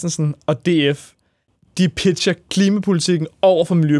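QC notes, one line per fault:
No faults heard in this speech clip.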